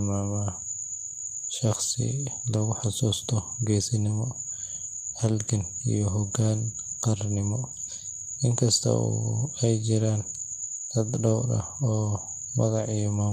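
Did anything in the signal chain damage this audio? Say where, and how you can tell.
No, nothing damaged this audio.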